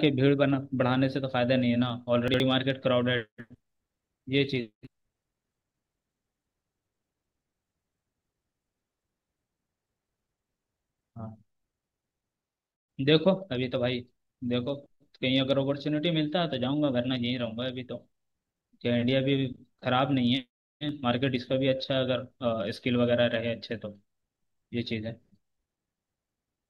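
At 2.28 to 2.40 s the speech briefly scrambles: chunks out of order. Two adjacent 60 ms chunks swapped places, with one arriving a chunk late and playing after the one that should follow it. The moment sounds jumbled, with three hard joins where mismatched waveforms meet. Unlike a dropout, no sound goes missing, and unlike a stutter, nothing repeats. The same material is present, just in the wrong sequence.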